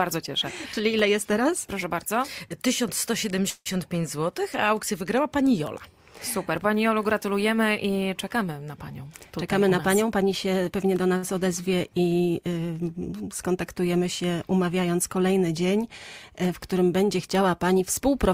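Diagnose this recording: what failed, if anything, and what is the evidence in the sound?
Network, call audio freeze: from 3.50 to 3.68 s, sound holds as a fading buzz for about 160 ms, then 20 ms of silence. It resumes where it stopped. Delayed packets likely emptied the jitter buffer.

Buffer, jitter buffer speed-up: from 9.01 to 10.54 s, audio runs at 108% with pitch unchanged, trimming roughly 150 ms. From 17.79 to 18.33 s it runs at 106%, trimming roughly 40 ms.

Network, short stall from a late packet: from 11.17 to 11.25 s, a sound is held 60 ms too long. The receiver stretched it until the packet arrived.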